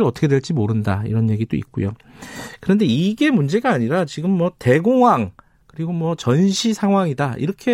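No technical faults can be heard anywhere in this recording.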